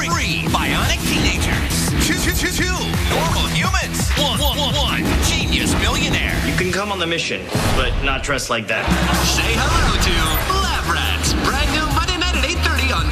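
No technical faults are audible anywhere in the recording.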